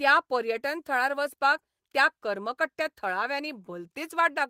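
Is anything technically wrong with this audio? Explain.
No, nothing technically wrong can be heard in this speech recording. There are no audible faults at any point in the clip.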